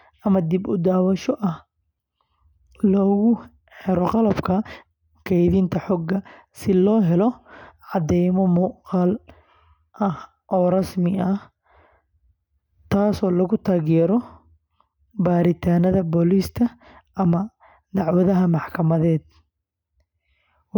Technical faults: none

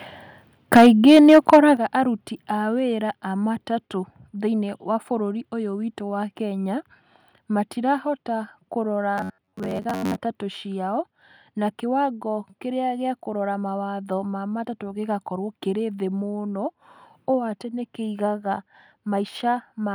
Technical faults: microphone overload; microphone volume stepped down; robotic sound from repeated short buffers

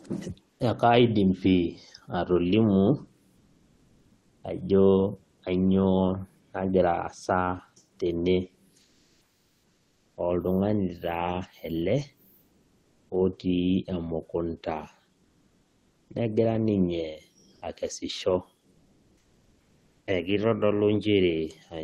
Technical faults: comfort noise in place of the background

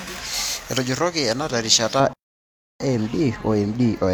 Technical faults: pre-emphasis left on; playback stall; time-compressed catch-up

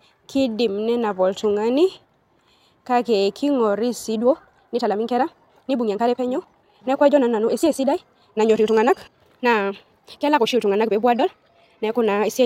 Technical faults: time-stretched section

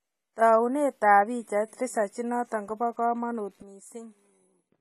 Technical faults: AAC compression; sudden gain jump

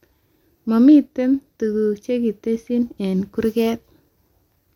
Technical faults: none

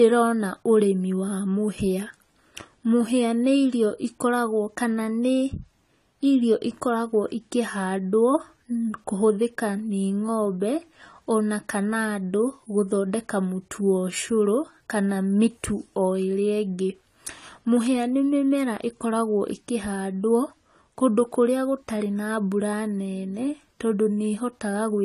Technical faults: AAC compression

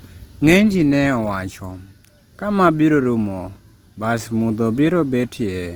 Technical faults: Opus compression

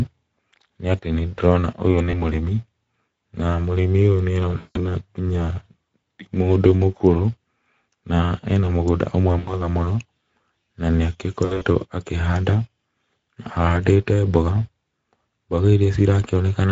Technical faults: Speex codec; VoIP packet loss concealed by the speech codec

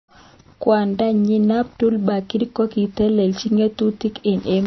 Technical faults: MP3 compression

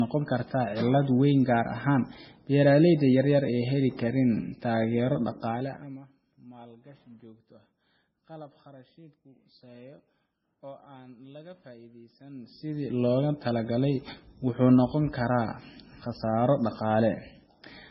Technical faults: low-bitrate audio saved at a high bitrate

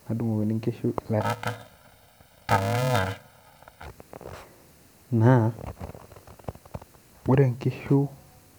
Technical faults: planar audio read as interleaved

